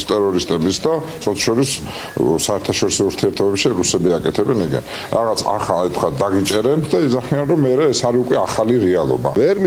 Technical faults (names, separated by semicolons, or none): short stall from a late packet